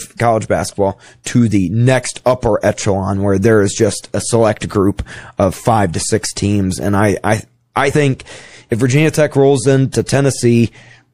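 Speech, with plainly audible MP3 compression running through all of it, which fits a bitrate around 64 kbps. With too few bits, the encoder drops weak frequency lines that flicker in and out from frame to frame. That gives the watery, swirling texture and smeared consonant onsets. Unlike a plain low-pass filter or noise reduction, the damage shifts moment to moment rather than sitting as a steady dullness, and the likely cause is the lossy encoding itself.

At 7.91 s, just after "I I I", compressed frames are skipped. About 50 ms of audio, roughly two frames of about 26.1 ms each, never plays, so the sound jumps forward. Because neighbouring MP3 frames overlap, the join is a brief smeared blip rather than a hard click. It also differs from a dropout, which would leave a silent gap instead of lost time.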